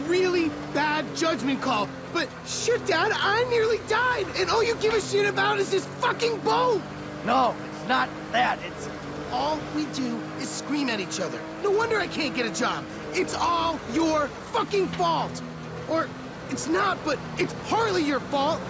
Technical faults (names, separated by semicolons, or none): none